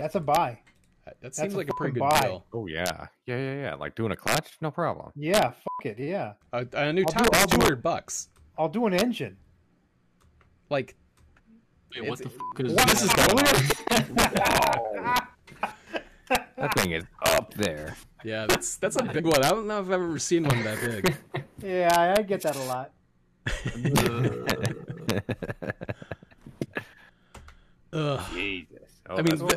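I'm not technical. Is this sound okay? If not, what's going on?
No. Throughout the clip, the loudest moments produce harsh, violent cracks, much sharper than ordinary distortion. This is integer overflow: when the sound peaks past the largest number the system can store, the value wraps around to the opposite extreme, causing a small share of samples to snap across the full range.

At 7.50, 11.38 and 19.18 seconds there's a brief glitch, and the sound jumps ahead by roughly 70, 150 and 50 milliseconds. These are compressed frames skipped. Chunks of the compressed file, each about 23 milliseconds long, were missing or rejected as damaged, so playback leapt over them.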